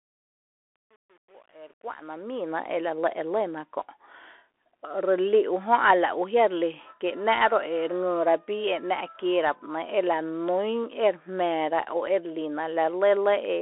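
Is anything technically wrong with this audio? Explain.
Yes. Bluetooth CVSD headset codec, throughout: the one-bit delta coding at 64 kbps confines the speech to a narrow telephone band with nothing above 3.8 kHz, leaving plainly audible scratchy sibilants and granular hiss. Truncation distortion on a fade, 0 to 2.51 s, before "ela lɇ e lýna": the fade-in keeps only about 9 bits without dither, so its quiet start sounds gritty, worst up to 2.15 s.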